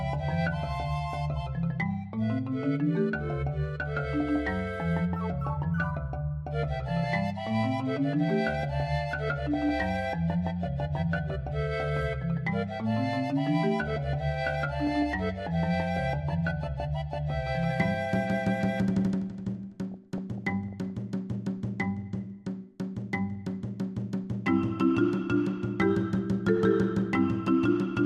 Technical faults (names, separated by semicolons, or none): MP2 compression; DAB burbling